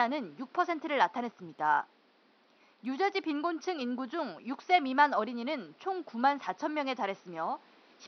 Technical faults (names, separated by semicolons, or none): none